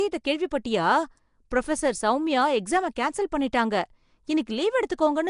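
Throughout, the speech carries a rough, hissy halo and a smeared, underwater quality, with nothing above 10.6 kHz. The likely cause is Nellymoser compression: the old Flash codec codes short blocks at a fixed bit budget, consistent with about 44 kbps, filling starved bands with noise.

At 1.50 s, a brief hiss about 11 ms long arrives just ahead of a sharp onset, which sounds softened. This is pre-echo: coding noise scaled for the loud attack is spread across its whole transform block, filling the quiet instant before it.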